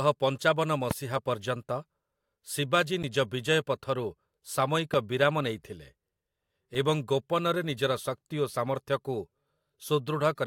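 At 0.91 s there's a loud pop, a single sharp hit lasting about 23 ms and standing around 15 dB above the speech, which keeps going right under it. It's likely a voltage pulse, from a plug, switch, static discharge or driver hiccup, getting into the signal path. At 3.03 s comes a block of digital silence. For about 10.7 ms the sound drops out and comes back with no fade, so it comes across as a tick or dip rather than a hole. That length fits a 512-sample buffer the playback side failed to fill in time. The second loud pop lands at 4.94 s, between "ପଥରୁ ସାମୟିକ" and "ବିରାମ ନେଇଥିଲେ", again a single thump around 15 dB up and about 24 ms long. The last fault is another block of digital silence at 6.75 s, just before "ଏବଂ ଗୋପନରେ ନିଜର ଶକ୍ତି". At roughly 2.7 ms it's too brief to sound like a gap and comes across as a tick, consistent with a 128-sample buffer being missed.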